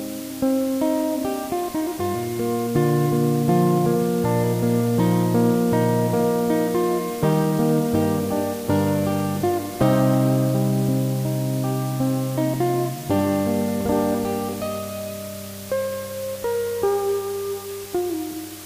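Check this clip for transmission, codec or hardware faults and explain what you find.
There's one fault, and it runs the whole way through: low bit depth with dither. The audio sits on a constant, even hiss, with the noise only about 15 dB below the signal. What's happened is the samples got squeezed down to 6 bits, with a bit of random noise mixed in before rounding. That trick swaps the gritty, signal-following distortion of coarse quantisation for plain white noise, so you hear a steady wash of hiss rather than crunch.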